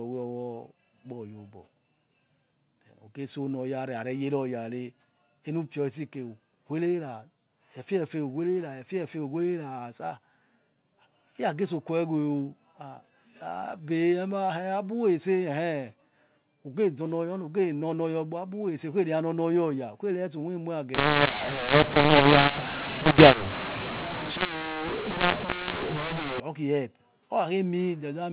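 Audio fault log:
20.95–26.40 s, mu-law and A-law mixed up: telephone speech coded as mu-law is decoded as A-law, so sample levels are scrambled and the quietest ones jump above silence, making the speech harsh and gritty and filling pauses with hiss. On a spectrogram, broadband noise smears across gaps; the waveform looks jagged and uneven.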